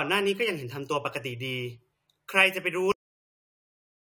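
The final buffers of the recording were never written out, producing a cut-off end at 2.92 s. The speech stops mid-sound with no natural decay and falls straight into digital silence, which holds for the remaining 1.17 s of the clip.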